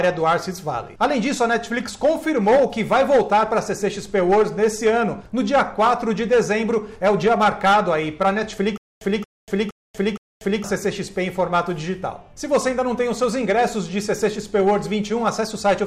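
From 8.78 s to 10.64 s the audio breaks into a stutter with silent gaps. A fragment of about 229 ms plays, then about 238 ms of dead digital silence follows, and the same fragment returns four times on a steady 466 ms cycle. This is likely a stalled player or stream that replays its last buffered chunk on each retry before running dry. The material that belonged in that stretch is missing.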